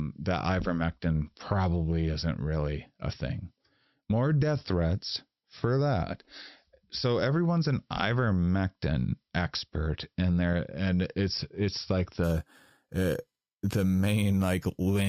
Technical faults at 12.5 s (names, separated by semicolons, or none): imaging from sample-and-hold upsampling